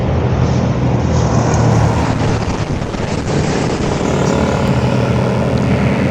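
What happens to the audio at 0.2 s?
Nothing goes wrong at 0.2 s; the audio runs through that moment intact, with no dropout, click or other fault.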